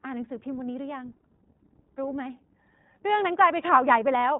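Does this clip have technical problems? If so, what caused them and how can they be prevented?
Yes. The speech carries iLBC codec damage throughout, and it is plainly audible. Nothing above about 3.8 kHz survives, so the audio sounds narrowband and dull. Each short frame's excitation is coded on its own without reference to the previous one, leaving a slightly rough, synthetic texture. The character fits iLBC's 15.2 kbps mode with 20 ms frames. To prevent it, capture and transmit with a wideband codec such as Opus instead of iLBC.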